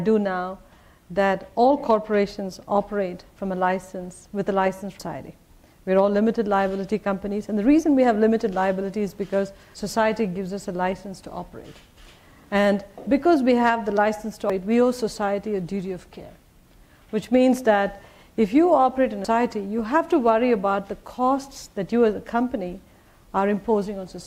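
Abrupt skips interrupt the sound at 5.00, 9.75, 14.50 and 19.25 s, each dropping roughly a third of a second with the two sides butted together. This is likely audio missing between chunks, lost while one 5-second chunk closes and the next opens.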